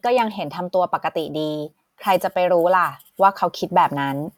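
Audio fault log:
Listening to the speech recording brought nothing to note; no moment in it stood out as a problem.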